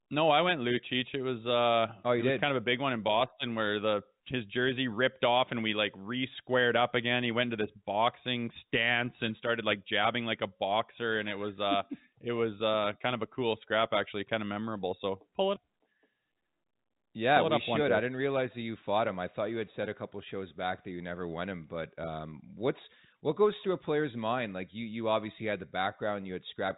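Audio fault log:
The speech sits in a band that stops at about 3.8 kHz, which fits ordinary G.711 A-law telephone coding at 64 kbps, and beyond that expected telephone character no fault can be heard.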